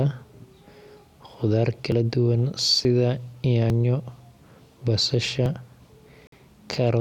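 Dropped buffers (overrun) occur in this speech at 0.97, 1.92, 2.85, 3.7 and 5.46 s, each a small jump forward: roughly 10 ms goes missing at the first and last, roughly 30 ms at the others. Samples were likely overwritten before the program read them, so the edges join with no gap. A Bluetooth stall cuts the sound to silence from 6.27 to 6.33 s, a gap of 52 ms. Playback then resumes, the pause probably caused by the headphones' buffer running dry while delayed packets were resent.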